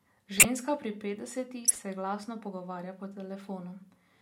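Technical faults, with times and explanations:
0.37–0.45 s and 1.65–1.81 s, corrupt frame decoded: bit errors damaged compressed frames that the decoder played anyway, so misread gains and codes put energy at the wrong frequencies for a few frames, then several more just before "se glasno", heard as brief chirping, noisy bursts.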